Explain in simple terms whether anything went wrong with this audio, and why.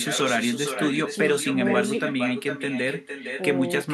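Something did go wrong. This speech has echo with no canceller, all the way through. The far end played the call on a loudspeaker, and its microphone picked it back up. Nothing removed it. So every phrase returns about half a second later as a quieter, thinner copy.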